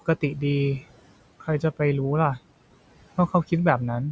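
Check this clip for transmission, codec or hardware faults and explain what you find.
Two faults stand out, both from the noise suppressor in the call's processing chain.

Noise suppressor artifacts run through the whole clip. The suppressor pulls down bands it judges to be steady noise, frame by frame, cutting the room noise by about 17 dB. The background drops away in the gaps and returns under the speech.

Speech cut by the noise suppressor occurs between 1.4 and 1.8 s. Here the suppressor mistook parts of the speech for noise and pulled them down by as much as about 16 dB. Roughly a tenth of a second in total is affected, so brief sounds in that span come across faint or swallowed.

The room noise itself sits about 20 dB below the speech, and nothing reaches above 8 kHz, consistent with the call's microphone processing.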